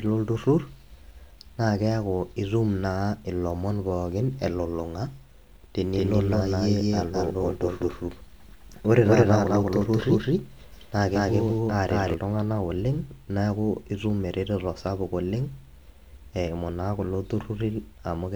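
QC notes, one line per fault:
5.84–12.14 s: doubled audio track. A second full-band copy of the speech runs roughly a fifth of a second behind at about the same level, with no decay or room colour, and starts and stops abruptly. Likely a second, slower capture path mixed in.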